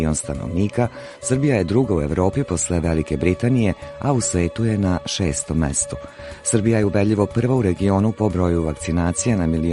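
No dropouts, clicks, distortion or timing glitches turn up anywhere in the recording.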